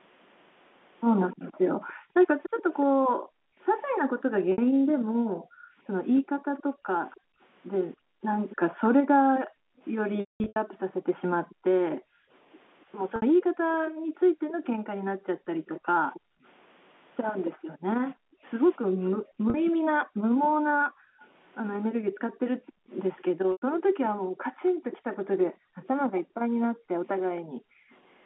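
Speech with several faults. An echo leak, a faint copy of the voice about 15 dB down, trails the speech by roughly 288 ms from 1.32 to 2.63 s, then by 270 ms from 6.15 to 11.97 s, 13.72 to 18.14 s and 19.65 to 25.88 s, with a trace about 40 dB down at 27.9 to 27.95 s. The fixed lag separates it from room reverb, and the likely cause is a far-end loudspeaker whose echo canceller did not fully remove it. From 1.36 to 27.9 s the background is gated by the echo canceller, ducking by up to about 40 dB for around fifteen seconds in all. Packet loss with pitch repetition appears at 4.52 s (60 ms), 10.2 to 10.56 s (300 ms scattered, longest run 200 ms), 13.16 s (60 ms), 19.5 s (40 ms) and 23.52 s (100 ms). The short ones sound like slightly held, buzzy tones, while longer ones fade into silence before the speech returns with a short cross-fade.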